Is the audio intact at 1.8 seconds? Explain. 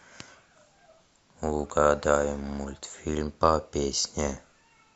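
Yes, the speech at 1.8 seconds plays through intact, with no dropout, click, distortion or other fault audible at that point.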